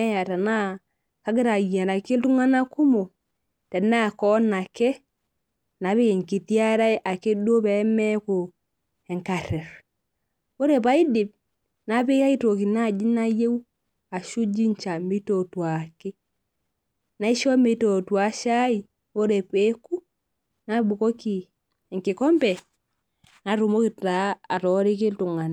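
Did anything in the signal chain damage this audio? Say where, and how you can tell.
No, nothing in this speech recording stood out on listening as a sign of damage anywhere along the signal chain.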